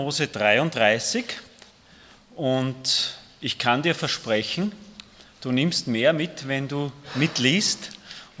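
No technical faults can be heard anywhere in the audio, so there is nothing here to time or attribute to a cause.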